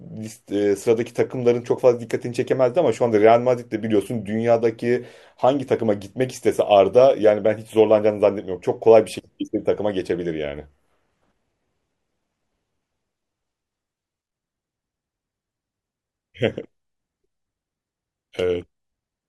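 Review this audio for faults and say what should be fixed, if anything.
Nothing needs fixing: the speech signal stays continuous and steady in level throughout, with no audible technical faults.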